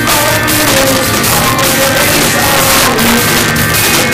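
Integer overflow runs through the whole clip. The signal's been pushed about 6 dB too hot somewhere in an integer stage, and instead of being held at the ceiling, any sample that goes past the maximum wraps round to the opposite extreme. Only a small slice of samples, around 3 percent, actually cross the line, but each one snaps full-scale the wrong way, so every loud moment comes with a harsh, splintering crack that's far nastier than ordinary clipping.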